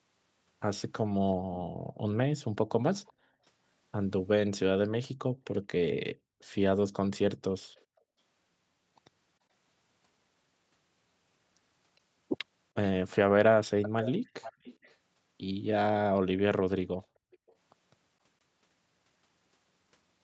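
Background gated by the echo canceller appears first between 1.37 and 3.44 s. While far-end audio played through the loudspeaker, the canceller pulled the microphone down hard, by about 37 dB at its deepest, so the room tone thins and drops out for about a second in total before returning. Inside that stretch, at 3.06 to 3.13 s, a faint delayed copy of the speech surfaces roughly 383 ms after the original, very low in level. This is an echo leak, likely residue the loudspeaker side's canceller failed to remove and sent back.

The same gating returns from 5.3 to 8.18 s, with the background dipping by about 39 dB and vanishing for well under a second overall. Another weak echo fragment sits at 7.75 to 8.01 s, trailing by 414 ms.

The clearest echo runs from 12.74 to 14.96 s. There a repeated copy lags 466 ms behind and is noticeably audible, only moderately below the direct speech.

A final faint echo at 17.02 to 17.53 s, again 466 ms late, overlaps a brief gating dip from 17.1 to 17.4 s. 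That dip reaches about 33 dB and lasts a fraction of a second.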